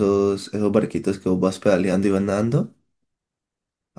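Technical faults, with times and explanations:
No technical faults can be heard in the signal: level, continuity and frequency balance stay steady across the recording.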